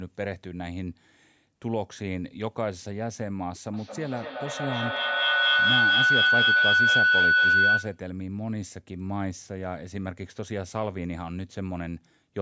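From 3.73 to 8.10 s, a feedback howl takes over the speech. Sound from a loudspeaker is re-entering a microphone on the same call and gaining on each trip. It narrows to a tone around 1.5 kHz, pulsing about every fifth of a second, and peaks at about 10 dB above the speech.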